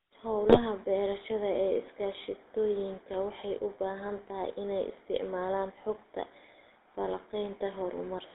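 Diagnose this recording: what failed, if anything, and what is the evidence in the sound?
The codec stage is at fault for the whole clip. The speech carries the buzzy, gravelly roughness typical of the GSM full-rate codec, and it is plainly audible throughout. The band runs from about 300 Hz to 3.7 kHz, so nothing bright survives. The codec rebuilds each voice from a vocal-tract model excited by sparse, regularly spaced pulses, which fits the 13 kbps full-rate scheme. That coarse excitation is what makes the voice rasp.

The network stage fails briefly, from 0.49 to 0.59 s. Here the speech breaks into a short burst of squawk and gargle. These are GSM bit errors. Corrupted bits on the radio link reached the decoder and scrambled the filter, pitch and gain values it uses to rebuild the sound. The spectrum bends and the level jumps for a moment. The damage spans about 100 ms, which points to a handful of consecutive frames being hit.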